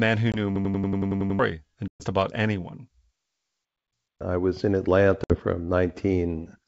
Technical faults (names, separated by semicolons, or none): packet loss on an ADPCM call; system hang loop